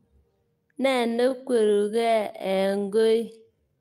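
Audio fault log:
0.88–3.81 s time-stretched section: speech abruptly slows to 0.59x speed with pitch unchanged, sounding dragged, likely software stretching that repeats short pieces.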